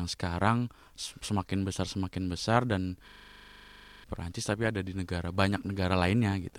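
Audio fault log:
3.08–4.04 s, system hang loop: right after "besar semakin besar dan" the speech freezes into a rapid, rasping stutter. A single 40 ms fragment repeats 24 times at 25 Hz, giving a coarse buzz with a machine-gun edge. The computer or its audio driver stalled while the sound hardware kept replaying the last filled ring buffer, which fits a buffer holding 40 ms of audio. About a second of the real speech is lost.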